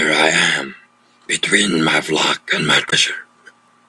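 At about 2.86 to 2.93 s there's a short burst of damaged data in the compressed stream. A stretch of the encoded bytes got corrupted, so the decoder misread those frames and lost sync before finding the next good header. You hear it as a quick glitch in the speech.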